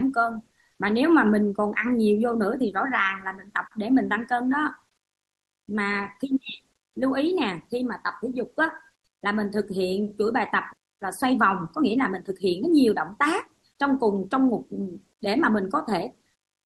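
Nothing goes wrong anywhere in this speech recording, which comes through a normal Opus call path whose top end stops around 12 kHz, as you'd expect from that codec at its usual settings.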